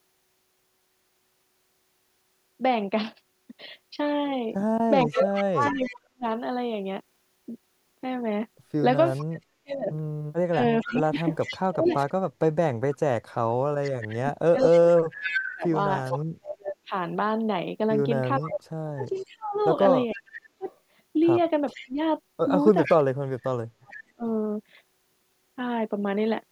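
From 5.03 to 5.94 s an echo leak returns a delayed copy of the speech 451 ms late, about 15 dB below it. The likely cause is a loudspeaker path the far-end echo canceller failed to remove. It recurs at 9.06 to 9.25 s (about 20 dB down), 10.8 to 16.2 s (prominent, about 5 dB down) and 18.44 to 23.97 s (about 20 dB down).

Overlapping this, speech is suppressed in double talk from 5.05 to 6.24 s and intermittently across 9.28 to 24.24 s. The sound dips or drops out by as much as around 40 dB, for roughly 1 s and then about 7 s in total. This is likely the canceller attenuating everything while both ends were active.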